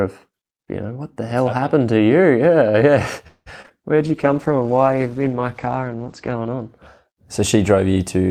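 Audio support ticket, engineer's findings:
Repeated packet loss (robotic sound), 3.27–3.72 s. Four gaps, roughly half the span patched by extending prior audio, longest hole 186 ms, about 60 ms simply missing. Choppy texture. Jitter buffer/network: consecutive losses, each concealed by extending prior audio before the next arrives.

Call bitrate drop, 3.98–6.74 s, worst for 2.51 s. Coarse, watery, muffled sound; top end falls from 20 kHz to 8 kHz. Encoder/bandwidth estimator: consistent with Opus pushed from 64 to 12 kbps.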